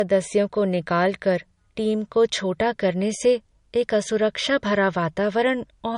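Throughout, the speech sounds dull and smeared, with nothing above 10.5 kHz. The likely cause is low-bitrate audio saved at a high bitrate: the cut-off and artefacts fit an MP3 near 40 kbit/s, later re-encoded around 192 kbit/s, which cannot restore the lost detail.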